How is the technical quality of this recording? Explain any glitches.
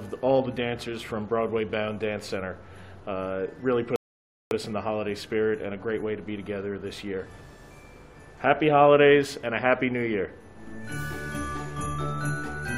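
The player ran dry once: at 3.96 s its store of downloaded audio emptied, so it halted and waited for more data before carrying on at 4.51 s. That is a rebuffering stall. Because playback simply pauses rather than skipping ahead, nothing is dropped; the sound falls abruptly into silence for about 0.55 s, then picks up at exactly the point where it broke off, stretching the timeline by that gap.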